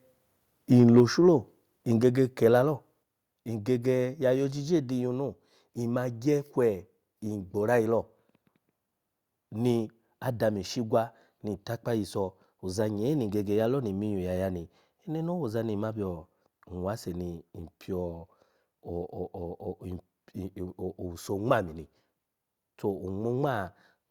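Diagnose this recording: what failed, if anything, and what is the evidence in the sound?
A harsh, crackling edge on the peaks from 0.79 to 1.0 s is microphone overload at the converter, likely input gain about 2 dB past full scale.

Level falls abruptly at 1.0 s (about 2 dB), then at 2.01 s before "kila lo" and 3.03 s before "ngege ya yo ojije" (about 4 dB each). This is microphone volume stepped down, likely by call processing reacting to clipping.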